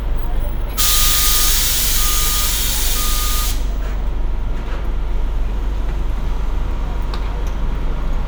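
Everyday sounds make up the clip, and nothing is technically wrong with it.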